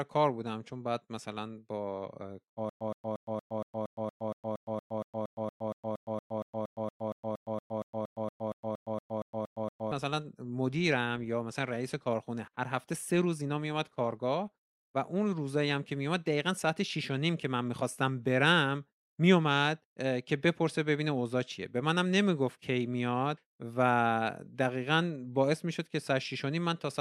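From 2.69 to 9.92 s, a stutter with silent gaps repeats a 120 ms burst followed by 113 ms of digital silence every 233 ms. The waveform shows identical blocks separated by flat lines. A stalled stream replaying its last fragment is the likely cause.

From 10.94 to 17.55 s, a call bitrate drop makes the speech coarser and rougher, bottoming out for about 5.8 s. This fits the encoder being cut from 64 to 28 kbps. The spectrogram shows sparser, blotchier detail.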